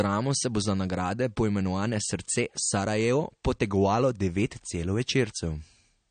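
From start to finish the speech has nothing above 9.1 kHz and a plainly audible watery, swirling texture, with smeared consonant onsets, likely MP3 compression. The starved encoder drops weak frequency lines frame to frame, which fits a bitrate around 40 kbps.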